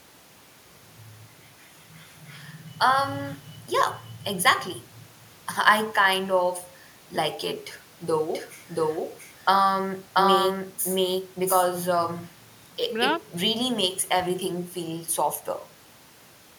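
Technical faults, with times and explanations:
8.34–12.06 s, doubled audio track: an equally loud, dry copy of the speech trails roughly 0.7 s behind and cuts in and out abruptly, likely from a second, slower capture path.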